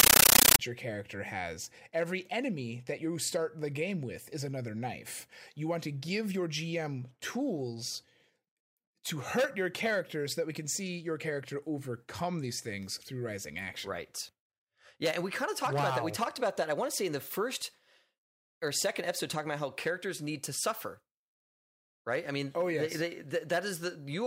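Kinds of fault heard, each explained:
Compressed stream played as audio: the first 0.59 s is loud chattering static, 13.3 ms noise bursts 31 times a second, which fits undecoded AC-3 data.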